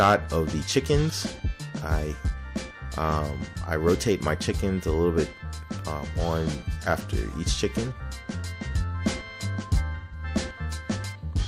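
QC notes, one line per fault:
9.95–10.23 s, AAC frame loss with concealment. About 170 ms of coded audio is missing, which fits four lost frames. The decoder rebuilds the gap from the last good spectrum, so the sound turns smeared, noisy or phasey before clean decoding resumes.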